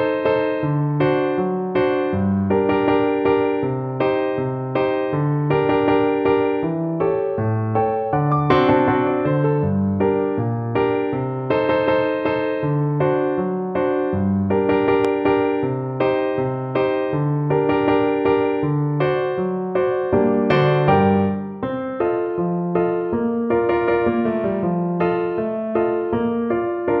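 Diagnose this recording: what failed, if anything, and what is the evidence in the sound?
A loud pop sits at 15.05 to 15.07 s, a single sharp pulse standing roughly ten decibels above the surrounding sound, which continues underneath it. The likely cause is an electrical transient in the analogue wiring, such as a plug or switch, injecting a voltage step into the signal path.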